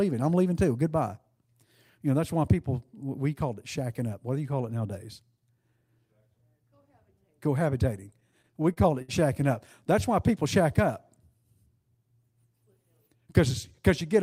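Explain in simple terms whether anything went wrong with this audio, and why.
Between 8.11 and 9.10 s the speech suffers repeated stalls (stutter): the audio data arrived late, so playback ran dry eight times, the longest for 62 ms. Each pause was filled by stretching the last sound, so nothing is lost, but the speech drags and stutters.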